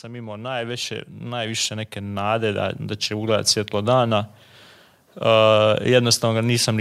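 Automatic gain rising runs from 0.05 to 3.56 s in this speech clip: the gain control judged the input too quiet and stepped its gain up by about 15 dB over those three and a half seconds, so the voice and the background noise swell together.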